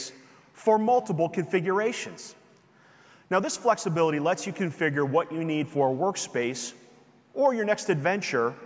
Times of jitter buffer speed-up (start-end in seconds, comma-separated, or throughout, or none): none